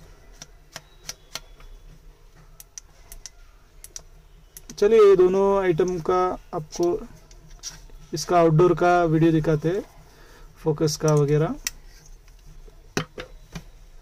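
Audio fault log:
4.83–5.27 s, hard clipping: peaks are driven about 8 dB past what the stage can pass, so they're sliced flat and you get a harsh, fizzy crackle.
8.34–9.36 s, hard clipping: same overload, about 7 dB this time, held longer, so the flattened tops spray high harmonics and the loud parts turn gritty.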